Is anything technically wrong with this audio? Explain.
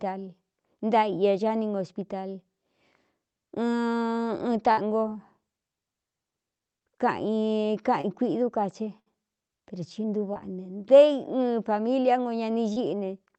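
Yes. The speech has two kinds of network fault. The band tops out near 8 kHz, which fits an Opus call stream at about 32 kbps.

Burst of packet loss at 4.71–4.79 s and 8.99–9.08 s: about 60 ms of packets failed to arrive in time on each occasion. The receiver extended the last sound for 58 and 66 ms, fading it down as the gap went on. Playback then resumed with that stretch of speech missing.

Short concealed packet loss at 8.01–8.05 s, 10.34–10.37 s and 12.73–12.78 s: roughly 20 ms went missing each time. The decoder bridged the gap by continuing the preceding sound for 21, 12 and 27 ms respectively, then blended back into the real signal, which is heard as a brief smear or wobble.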